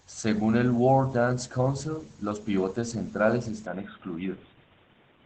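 Throughout, the speech passes through Opus voice compression at 12 kbps in SILK mode, with the excitation coded coarsely and the band held to wideband, so nothing reaches above about 8.6 kHz. The voice comes out plainly muffled, hoarse and faintly robotic.

From 3.66 s, just after "los pivotes centrales", to the end, the input was likely switched to a poorer device. There is no gap and no real change in level, but everything above 3.8 kHz vanishes and a new background noise appears, roughly 30 dB down, so the sound turns dull and boxy.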